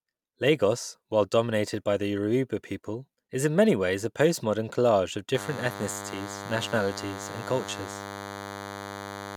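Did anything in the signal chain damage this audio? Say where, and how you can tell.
Yes. From 5.34 s to the end of the clip at 9.37 s, a thin, steady DECT cordless phone buzz sits roughly 10 dB below the speech. Its 100 Hz repetition and dense harmonics point to the analogue stage rectifying radio bursts sent every 10 ms.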